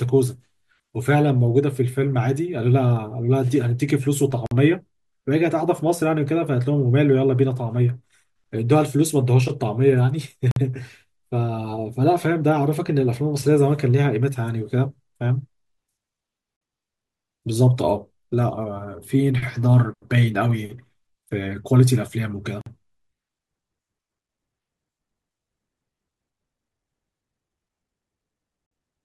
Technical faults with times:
4.46-4.51 gap between chunks
10.51-10.56 gap between chunks
16.56-16.61 gap between chunks
22.61-22.66 gap between chunks
28.66-28.71 gap between chunks

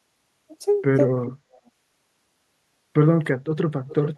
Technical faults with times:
1.23-1.70 echo leak
3.87-4.18 echo leak

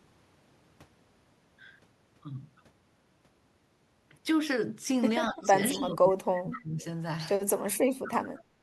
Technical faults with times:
5.30-6.85 speech suppressed in double talk
5.42-5.46 echo leak
5.81-5.86 echo leak
6.36-6.40 echo leak
7.74-8.58 speech suppressed in double talk

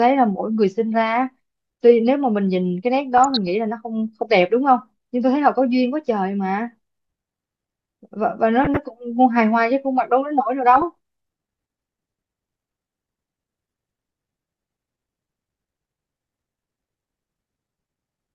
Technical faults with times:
3.17-3.47 DAB burbling
8.64-8.77 DAB burbling
10.75-10.83 DAB burbling

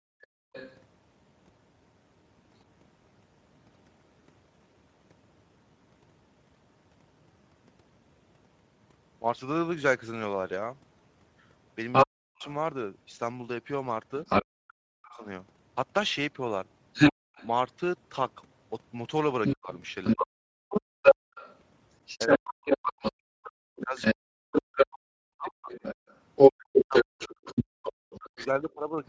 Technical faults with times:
0.00-29.08 Speex codec
0.00-0.53 background gated by the echo canceller
0.21-0.79 other side's voice leaking through
11.92-29.08 other side's voice leaking through
12.05-15.25 speech suppressed in double talk
17.13-17.35 background gated by the echo canceller
19.55-29.04 speech suppressed in double talk
20.55-26.07 background gated by the echo canceller

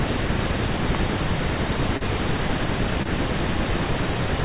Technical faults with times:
0.95 electrical switching spike
1.97-2.03 short concealed packet loss
3.02-3.08 short concealed packet loss

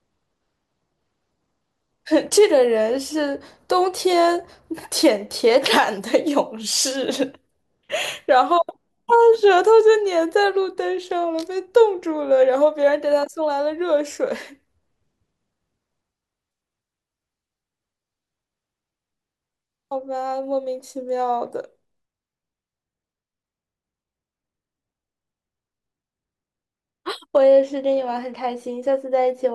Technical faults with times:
27.37-29.54 de-emphasis applied wrongly

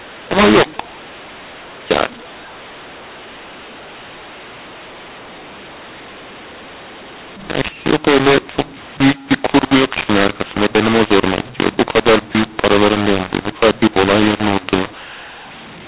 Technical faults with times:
0.00-15.88 mu-law and A-law mixed up

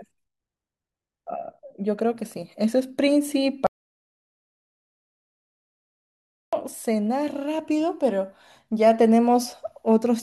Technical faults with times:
3.67-6.53 audio dropout to silence

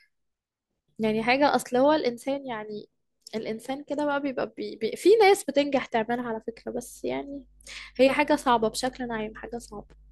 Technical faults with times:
1.48 block of digital silence

